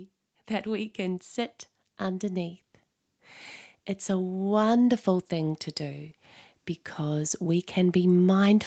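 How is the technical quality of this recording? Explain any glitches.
The speech shows automatic gain rising twice, the level creeping up in a way not set by the talker. The first swell runs from 4.05 to 6.08 s and adds about 4 dB. The second starts at 6.96 s and continues to the end. Each time the gain control judged the input too quiet and raised its gain gradually, so voice and background noise grow louder together. The whole recording tops out near 8 kHz, which fits the call path's bandwidth.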